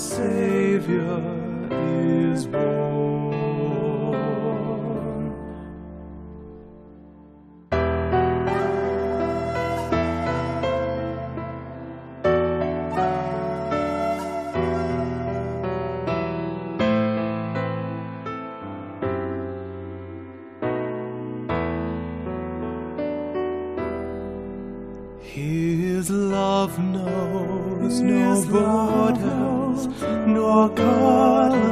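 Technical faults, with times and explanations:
Nothing stood out on listening that would mark a technical fault anywhere in the audio.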